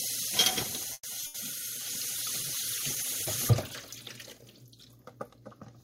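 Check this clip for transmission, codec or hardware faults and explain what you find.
Four transmission faults are audible in this recording of everyday sounds, all within the first three and a half seconds.

From 0.93 to 1.06 s the sound stalls. The last moment is stretched into a fading buzz that drops to about 40 ms of near silence, then the sound carries on exactly where it stopped, about 110 ms later than before. Nothing is lost, only delayed. This is a call audio freeze, likely caused by packets held up in the network long enough for the jitter buffer to run dry while the receiver padded the wait.

At 1.20 to 1.24 s there is a brief smear, a small wobble lasting about 20 ms. This is short concealed packet loss: a sliver of audio never reached the decoder in time, so the receiver extended the preceding sound to cover the hole and then blended back into the real signal.

Right after, from 1.26 to 1.36 s, a longer held tone or hiss sinks in level. 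The sound then resumes further along, with about 80 ms skipped. This is a burst of packet loss. Several consecutive packets went missing or arrived too late, and the receiver stretched the last audio while fading it, rather than leaving a hard gap.

From 1.77 to 3.46 s the sound turns coarse, watery and dull, with the highs trimmed away. For about 1.6 s of that stretch it stays at its roughest. This is a call bitrate drop. The bandwidth estimate collapsed and the encoder was pushed from 96 kbps down to 14 kbps. At that rate Opus quantises coarsely and cuts the upper frequencies until the bitrate climbs back.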